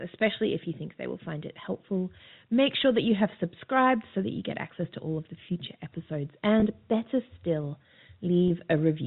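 At 6.60 to 6.62 s, between "of the future episodes" and "better still", and again at 8.48 to 8.50 s, about 20 ms of speech drops out. Each gap fits a single lost packet, bridged by packet loss with pitch repetition: the last pitch period is looped, giving a brief held, buzzy tone over the G.711 telephone band.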